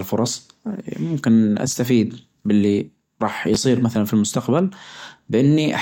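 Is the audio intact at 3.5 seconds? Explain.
No. Right around 3.54 to 3.56 s there's a chunks-out-of-order glitch: one 10 ms chunk lands a chunk late, so two short pieces swap places. Nothing goes missing, but the hard joins give a quick jumbled moment just before "مثلا في المستقبل".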